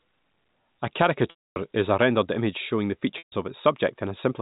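A speech recording over a telephone-band G.711 channel, cut off above 4 kHz, with two gaps from packet loss with pitch repetition: 1.30 to 1.56 s (260 ms) and 3.18 to 3.32 s (140 ms). In each, the last pitch period loops as a brief buzzy hold that fades to silence within about 50 ms, then speech cross-fades back, which fits runs of lost 20 ms packets. Unlike a plain dropout, the gap opens on that held tone rather than a hard cut.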